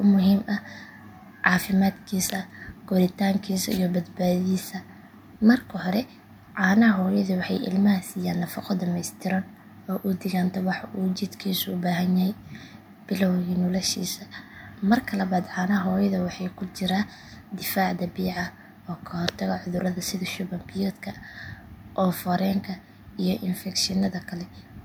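No audible fault turns up anywhere in the speech clip.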